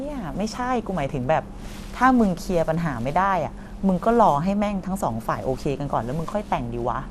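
Throughout, likely MP2 compression at a rate fitting 80 kbps switched off upper sub-bands, leaving nothing above 14.4 kHz and a dull, gurgling, granular sound.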